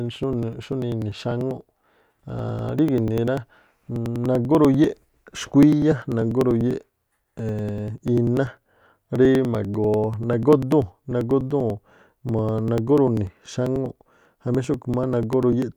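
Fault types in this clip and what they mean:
Periodic USB or driver dropouts: something stalls the USB bus or audio driver every 0.098 s, so about 2 ms of speech is skipped each time from 0.14 to 15.72 s, giving a steady ticking, roughly ten per second, heard wherever the speech carries signal.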